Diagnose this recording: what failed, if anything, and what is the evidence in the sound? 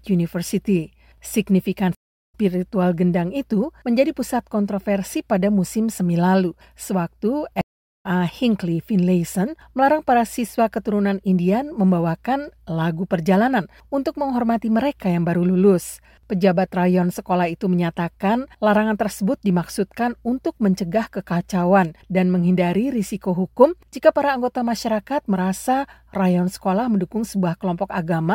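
The sound drops out for about a third of a second at 1.95 to 2.35 s and again at 7.61 to 8.06 s, each time resuming a little further on. That's a stream reconnect at the network stage: the connection broke, playback went silent, and a fresh decoder rejoined the live stream.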